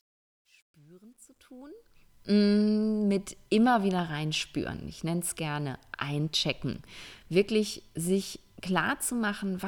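From 0.00 to 2.31 s the speech fades in with truncation distortion on a fade. The gain stage keeps too few bits and adds no dither, which fits a path holding roughly 10 bits. At low levels the waveform collapses into coarse square steps. Worst from 0.0 to 1.5 s, the quiet start sounds gritty. On a waveform, blocky staircases appear. A spectrogram shows broadband harmonic hash in place of a clean rise, which clears as the fade reaches full level at 2.31 s.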